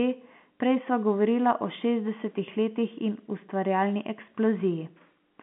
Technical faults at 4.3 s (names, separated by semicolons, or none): none